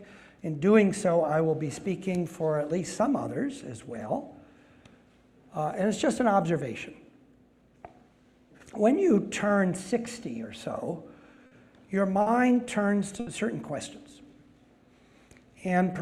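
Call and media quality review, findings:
Short stall from a late packet, 11.46–11.53 s, 12.21–12.28 s, 13.20–13.29 s. Jitter buffer ran dry; receiver held the last sound for 50, 50 and 70 ms until the packet arrived, then resumed in place. Nothing lost, delay grows each time.

Jitter buffer slow-down, 14.09–14.61 s. Receiver repeating single pitch periods to rebuild reserve. About 52 ms added, playback at 91% speed with unchanged pitch; audio sounds drawn out.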